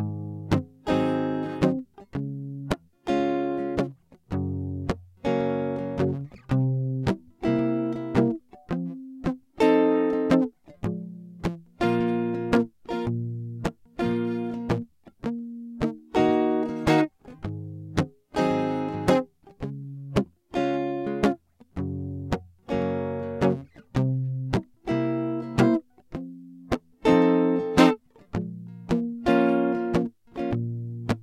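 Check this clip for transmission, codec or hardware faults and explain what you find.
No faults turn up in this music clip.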